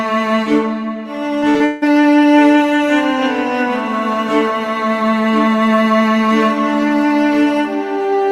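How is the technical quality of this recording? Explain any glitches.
The music has one glitch. From 1.39 to 1.84 s there is repeated packet loss (robotic sound). Each dropout is patched by extending the previous sound. The longest gap is 158 ms, and over half the stretch is filled in. The result is choppy, with pieces missing.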